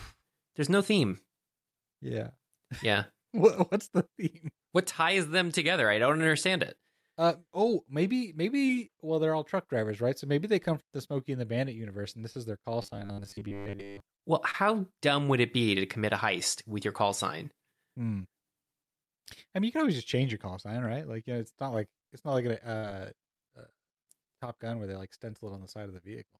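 A speech recording with three kinds of network fault. Short concealed packet loss occurs at 6.77 to 6.81 s, at 8.67 to 8.71 s just after "oh maybe", and at 14.51 to 14.55 s just before "dumb would it be". Each time about 20 ms of audio arrived too late, and the receiver bridged 14 to 26 ms by extending the preceding sound, leaving a brief smear or wobble. From 12.82 to 14.00 s there is robotic sound from repeated short buffers. The likely cause is that new audio arrived too seldom, so the playback kept replaying a short slice for most of that stretch. That imposes a rigid, metallic 100 Hz buzz, which fits a buffer about 10 ms long. At 22.77 to 22.85 s, right after "it's not like a", a burst of packet loss removes about 60 ms. The gap is covered by roughly 55 ms of continued, fading sound, and the speech then picks up further along with that stretch missing.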